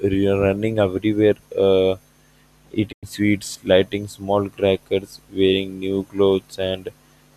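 At 2.91 s the speech falls silent in a digital broadcast dropout. The receiver stopped getting frames it could decode and muted its output. The sound fades out over about 20 ms, and the hole runs to 3.05 s. Roughly 96 ms of programme is gone, which fits about four lost frames. Nothing sent during that gap can be recovered. The audio comes back on "sweets lighting small crackers".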